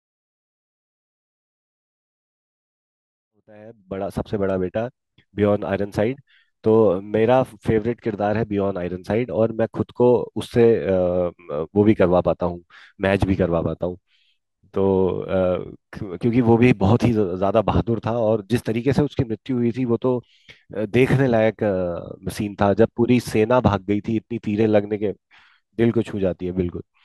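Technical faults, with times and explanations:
No technical faults found in the speech; the fade-in from around 3.5 s to 4.69 s is a smooth editorial ramp with no click or hard edge.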